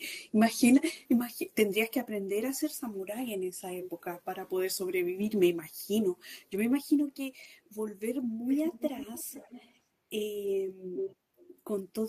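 Speech, with two kinds of transmission fault. The first is lost packets rebuilt from error correction: at 5.21–5.27 s, 6.53 s, 7.43–7.45 s and 10.45 s the sound turns briefly rougher and noisier, with no gap. Each time, the decoder played the low-bitrate copy carried in the following packet. The first event lasts about 40 ms, which fits two lost 20 ms frames, and the others about 20 ms each. The second fault is echo leak. A copy of the speech delayed by 372 ms is heard at 8.49–9.72 s at about 15 dB below the direct speech, at 10.96–11.16 s at only about 5 dB below, and at 11.37–11.59 s faintly, roughly 30 dB down. The likely cause is a far-end loudspeaker whose echo canceller let part of the microphone pickup through and sent it back.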